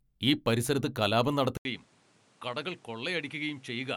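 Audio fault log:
1.57–3.97 s, input switched to a poorer device: likely a change of input device; after an 80 ms gap, speech drops about 10 dB, cuts off above 11.3 kHz, and carries new low background noise.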